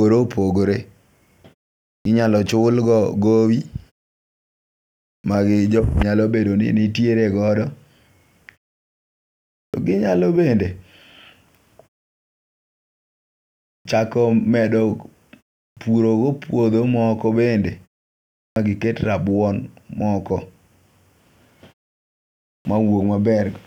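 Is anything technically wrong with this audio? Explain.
Yes. The speech has clipped starts after a pause at 2.01, 5.2, 9.7, 13.81, 15.73, 18.52 and 22.61 s. The output device idles in silence and wakes late. About 40 ms of onset is lost each time, so sounds like "ginyalo bende" begin abruptly.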